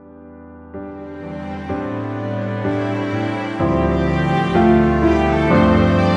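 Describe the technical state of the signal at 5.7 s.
At 5.7 s the signal is intact, with no audible dropout, distortion or other fault at that point.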